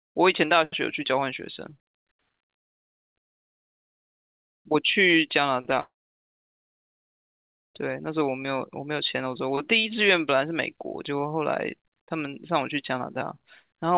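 A long network dropout, likely cause of the break between 5.80 and 5.97 s, interrupts the speech. About 160 ms of audio never arrives. The receiver covers roughly 150 ms by stretching the last sound into a buzz or hiss that fades, and the final stretch, about 60 ms, is near-silent. The speech then resumes, but the lost portion is simply gone. Throughout the clip the audio is band-limited, with nothing above 4 kHz, which fits a narrowband G.711-style call codec.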